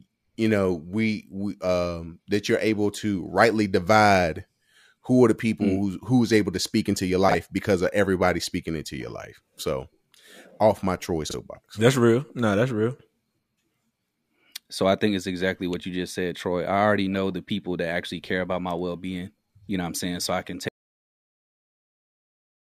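Frames out of order occur at 7.28 to 7.35 s, just after "to speak into your" and before "because of everybody speaking", and again at 11.28 to 11.34 s, between "off my troy" and "that's real no that's". In each, two adjacent blocks of roughly 26 ms were decoded in reversed sequence, which fits single compressed frames swapping places. The brief stretch plays with its halves exchanged, producing a garbled flutter, though no time goes missing.

An audio dropout to silence begins at 20.69 s, right after "saying so i can", and lasts to the end of the clip. The sound cuts off mid-flow into silence with no room tone, because the input signal stopped reaching the recorder while it kept writing silence. This is likely due to a lost connection or an accidental mute, and whatever followed is gone.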